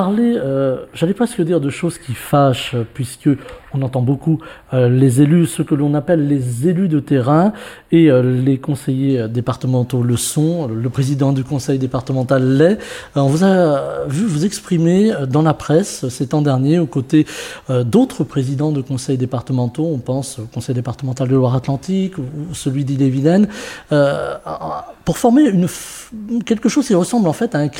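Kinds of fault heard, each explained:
channel delay (comb filtering): one channel runs a few samples behind the other, under a tenth of a millisecond, which points to a tiny buffer offset, and the two are then summed to mono. Content shared by both cancels at evenly spaced frequencies, and with so short a lag the first notch sits high, around 7 kHz. From the start to about 9.1 s the sound is hollow and phasey, with its upper presence hollowed out.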